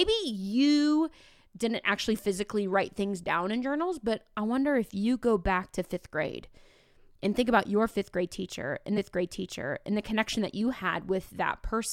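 At 8.97 s, after "fifth grade teacher and", a stream segment repeats. About one second replays after a small blip at the jump back, ending at 9.96 s before "the connection that you".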